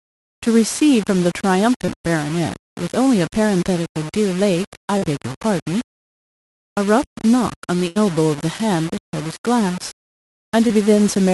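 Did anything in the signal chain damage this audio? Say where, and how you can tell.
Yes. Sample-format conversion: grainy distortion that tracks the level runs throughout, roughly 20 dB below the signal. The likely cause is low bit depth without dither, about 5-bit rounding. The waveform shows coarse steps.

Network: short concealed packet loss at 1.85–1.90 s, 4.98–5.04 s and 10.67–10.71 s. Roughly 20, 40 and 20 ms were filled in, heard as brief smears and visible as smoothed spectrogram patches.

Network: a burst of packet loss at 7.88–7.97 s. About 80 ms were synthesised as a held, fading tail, then the sound resumes further on. The waveform shows a decaying envelope.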